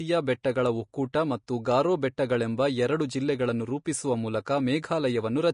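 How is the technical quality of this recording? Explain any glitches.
The technical quality is compromised throughout the speech. Likely Vorbis compression at a low bitrate, fitting roughly 37 kbps, cuts everything above 10.5 kHz and coarsely quantises the treble, leaving hissy, grainy sibilance and blurred consonant attacks.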